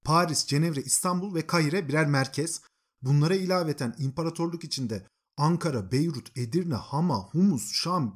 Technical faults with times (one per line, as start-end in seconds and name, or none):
none